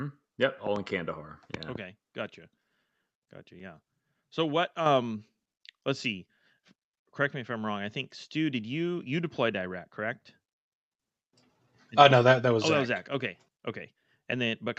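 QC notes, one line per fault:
4.86 s, microphone volume stepped up: input gain raised in one step, so speech and background jump together by about 6 dB, not a louder talker.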